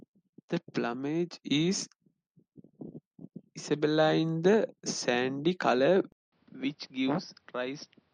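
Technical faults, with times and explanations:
6.12–8.13 s, input switched to a poorer device: after a silence of 200 ms the speech returns about 10 dB quieter, boxy, with nothing above 5.9 kHz and a new noise floor roughly 35 dB down, likely from recording moving to a narrower-band microphone.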